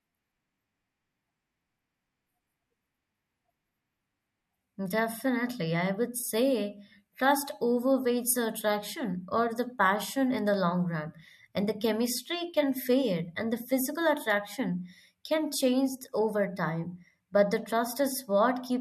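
No technical faults are audible.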